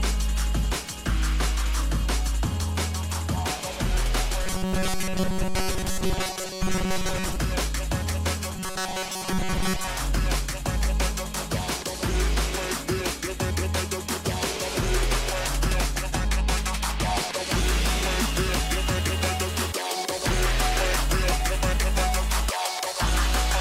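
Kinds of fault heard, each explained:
Robotic sound from repeated short buffers: in two stretches, 4.44 to 7.36 s and 8.55 to 9.88 s, the sound turns into a rigid metallic buzz pinned near 188 Hz, likely from playback starved of new audio, looping a slice of about 5.3 ms most of the time.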